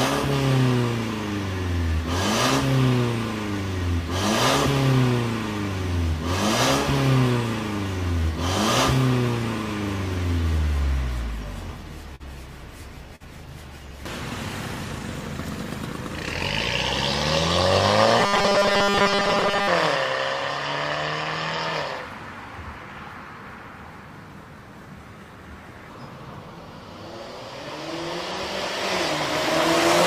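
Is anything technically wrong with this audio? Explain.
Yes, there are two kinds of fault.

Short concealed packet loss occurs twice, at 12.15 to 12.23 s and at 13.16 to 13.26 s. Each time about 40 ms of audio failed to reach the decoder in time. The receiver covered the gap by extending the preceding sound, for about 43 ms the first time and 45 ms the second, then crossfaded back into the real signal. The second event also drops about 8 ms outright. Each one is heard as a brief smear or wobble where the sound loses definition.

Robotic sound from repeated short buffers runs from 18.20 to 19.68 s. Across most of that stretch the sound becomes a rigid, metallic buzz at a fixed 200 Hz. The likely cause is audio arriving too seldom, so the playback fills the time by looping the last 5 ms, one period of that 200 Hz tone, while the incoming audio is skipped. The result still roughly tracks the underlying sound but has a mechanical, buzzing quality.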